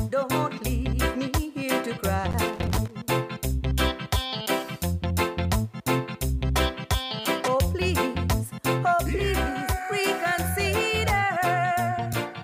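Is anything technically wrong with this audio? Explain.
Yes, there's loose connector crackle from about 2.31 to 2.91 s. A worn or dirty contact somewhere in the chain keeps connecting and disconnecting as it shifts, chopping the audio in and out, so you get an irregular burst of scratchy crackle for that stretch.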